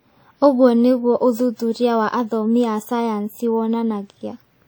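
Throughout, long transform blocks smear quantisation noise into a ringing, washy hiss that breathes with the speech. This is likely WMA compression at a rate fitting 48 kbps. Unlike band-limited codecs, content still reaches 20.1 kHz.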